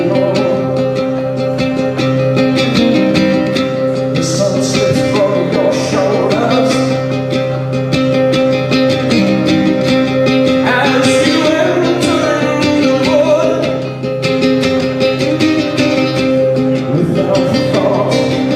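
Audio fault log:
No faults heard anywhere in this recording.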